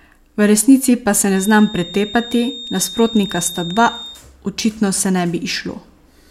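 A speech recording with a feedback whistle from 1.26 to 4.23 s: a thin, steady 3.7 kHz tone sitting roughly 15 dB below the speech, swelling and fading slowly in level. It is likely a speaker-to-microphone loop held just short of runaway. A spectrogram shows one narrow horizontal line across that span.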